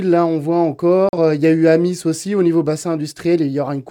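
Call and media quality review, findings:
Short hard mute, sound cut to silence from 1.09 to 1.18 s, then resumes further along. Digital broadcast dropout at receiver/decoder: corrupt or missing frame failed checksum, output muted until valid frames returned. Roughly 43 ms of programme lost outright, consistent with a single dropped frame.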